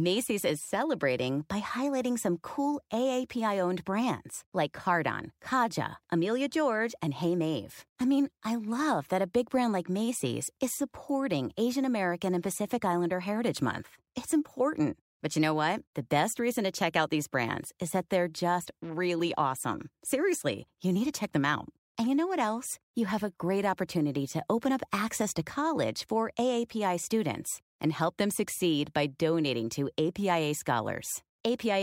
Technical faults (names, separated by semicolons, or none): none